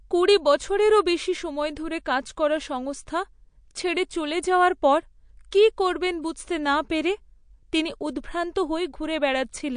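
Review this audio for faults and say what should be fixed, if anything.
The whole clip sounds watery and swirly with nothing above 9.8 kHz, likely MP3 compression at a low bitrate, something like 48 kbps, starving the treble. At 5.51 s there's pre-echo: about 11 ms of hiss smeared ahead of a sharp attack, because the codec spreads its noise across the block. Keep a higher-bitrate or lossless master and encode from that.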